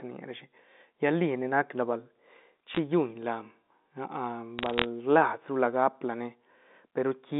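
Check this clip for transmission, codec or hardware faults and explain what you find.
Two bursts of bit errors on a digital phone line break up this telephone-band speech, one at 2.75 to 2.79 s and a longer one from 4.59 to 4.85 s. Both sit on a line that passes roughly 200 Hz to 3.7 kHz, with the faint level-tracking hiss of 64 kbit/s G.711 mu-law coding underneath.

In each burst, corrupted bits in the 8-bit logarithmic samples throw individual samples far from their true values. Where a sign bit or a high-order bit is hit, the sample leaps toward full scale or flips polarity, and that makes a sharp tick. The error rate in both bursts is a fraction of a percent. The first burst gives a brief cluster of clicks. The second, lasting about a quarter second, builds into a crackle laid over speech that is not changed underneath. On a waveform the bad samples stand out as isolated single-sample spikes above the speech envelope. 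On a spectrogram each one appears as a thin vertical line running across the whole band up to 4 kHz, dense in the second burst.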